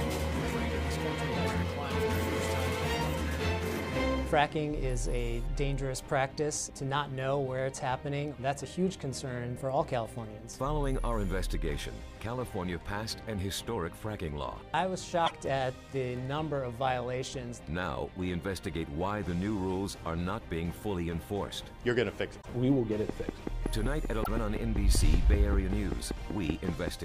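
At 15.25 to 15.32 s the sound jumps forward for a brief stretch about 60 ms long, spanning two or three 24 ms frames. The likely cause is a broken MP3 bit reservoir: frames were lost, and the next frame borrowed bytes that now belong to a different frame. The same short disruption recurs at 22.41 to 22.47 s.

From 23.09 to 26.89 s a train of clicks ticks over the audio. It has roughly twenty near-identical pops, evenly spaced at about 5.2 per second and peaking about 15 dB above the surrounding sound. This is likely interference or a faulty connection injecting pulses. Their steady rhythm and matching shape distinguish them from random crackle or isolated pops.

During that click train, at 24.23 to 24.28 s, another roughly 50 ms jump ahead is heard. It likely has the same broken bit reservoir character as the earlier two, which is different from the repeating clicks around it.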